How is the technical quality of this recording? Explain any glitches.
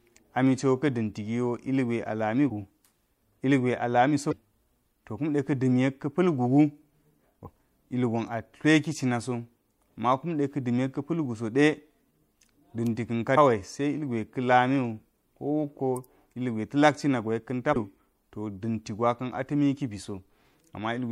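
The recording is marred by five brief bursts of damaged data in a compressed stream, at 2.46–2.50 s, 4.29–4.33 s (after "a lami"), 7.43–7.47 s (before "ilgon a tleki cina"), 13.36 s (after "da̱nka̱ ka") and 17.73–17.76 s. Corrupted bytes make the decoder misread frames, lose sync and hunt for the next header, so each spot is a short squawk, chirp, click or hole lasting about 40 ms or less.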